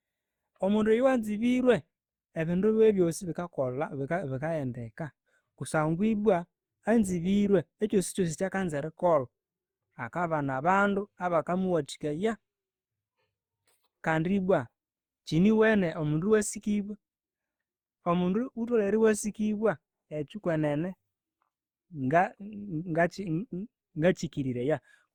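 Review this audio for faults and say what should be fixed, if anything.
The speech was likely re-encoded repeatedly with a lossy codec, about four passes consistent with Opus near 64 kbit/s. This is generation loss: each pass requantises on a shifted frame grid, so throughout the clip the sound turns swirly, smeared and hollow, with blurred consonant attacks. To prevent it, keep a lossless master and encode only once, at the final delivery stage.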